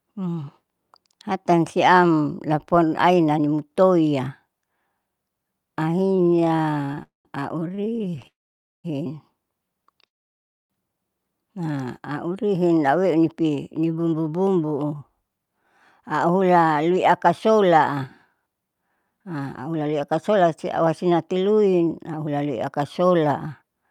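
Speech with stalls, freezes and timing changes. Repeated stalls (stutter) hit 6.05–7.01 s and 7.75–8.25 s. That is 23 and then 14 brief stalls of up to 29 ms, filling about a third of each span. Late packets kept draining the jitter buffer, so the audio drags but loses nothing. Call audio freezes follow at 7.03–7.27 s, 8.27–8.86 s and 10.06–10.72 s. The sound stops, fades, and resumes where it left off, inserting gaps of 0.22, 0.57 and 0.64 s that are mostly silent. The likely cause is packets held up in transit, emptying the buffer. A jitter buffer slow-down at 11.66–11.85 s stretches the audio to 80% speed by repeating pitch periods. This adds 49 ms and rebuilds the buffer's reserve. A jitter buffer speed-up runs from 12.96 s to the end at 109% speed. Short pitch-period pieces are cut to shed the built-up delay, removing about a second in total and making the speech sound hurried.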